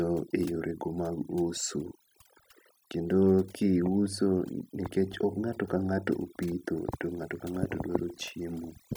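A noise reduction stage was pushed far too hard across the whole recording, so the clip suffers from overdone noise removal from start to finish. Each frequency band that sits close to the estimated noise floor gets pulled down or gated out entirely, and the softer parts of the speech fall below that line along with the noise. Between phrases the background drops to an unnatural near-silence scattered with tinkly, musical specks.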